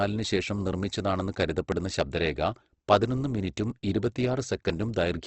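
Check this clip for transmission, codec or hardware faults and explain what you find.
One codec fault runs through the whole speech clip. Opus compression is the likely cause: starved bands get filled with folded or noise energy, making the audio grainy and rough, with nothing above 8.3 kHz. There is less swirl than MP3 would give, at a bitrate near 16 kbps.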